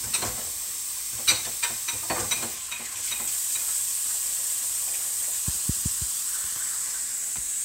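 No faults are audible anywhere in this recording of sounds.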